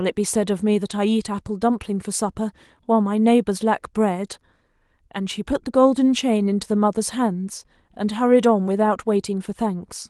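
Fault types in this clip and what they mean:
No faults can be heard in this speech clip. The Opus voice compression is working as expected at 24 kbps in its hybrid mode, keeping the full audio band with only light coding traces.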